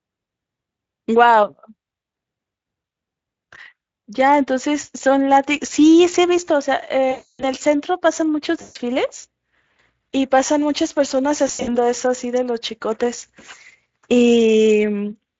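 VoIP packet loss concealed by the speech codec: packets dropped at 7.11–7.45 s (280 ms), 8.61–8.77 s (140 ms) and 11.47–11.77 s (160 ms scattered, longest gap 80 ms). The lightly coded Speex decoder extrapolates, stretching speech into fading buzzy tones or coloured noise that stay weak briefly afterward.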